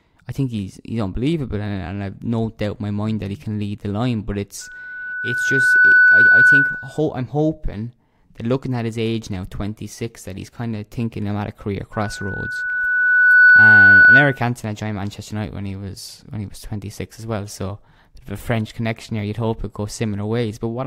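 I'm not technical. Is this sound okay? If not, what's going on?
No. There are two bursts of loudspeaker feedback squeal, from 4.61 to 7.00 s, ending just before "hoping that looking at", and from 11.93 to 14.42 s, right after "I'm at a career". The microphone is picking up the loudspeaker it feeds, so one pitch, a high whistle near 1.5 kHz, loops round and grows on itself. Each time it swells over roughly a second and a half and ends up clearly louder than the speech.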